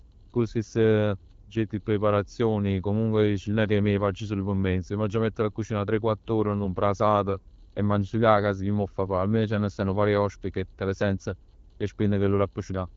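Nothing's wrong here: it's a speech recording carried over the AMR wideband (HD Voice) codec at 12.65 kbit/s, and no technical fault turns up anywhere in it.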